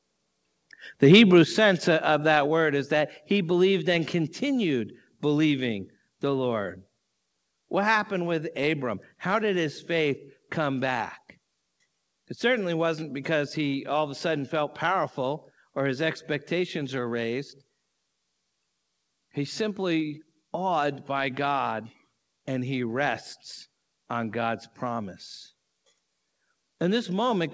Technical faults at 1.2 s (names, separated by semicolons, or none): microphone overload